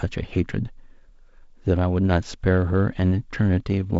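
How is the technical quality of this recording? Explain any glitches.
No glitches or faults heard.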